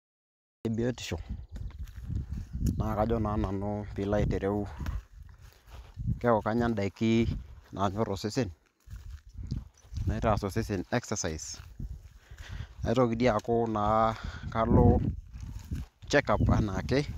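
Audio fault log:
0.00–0.65 s, cut-off start: digital silence runs to 0.65 s, where the speech enters abruptly partway through a sound, with no natural onset or fade-in. The capture evidently began late, so the first syllable's attack was never recorded and the waveform starts mid-cycle.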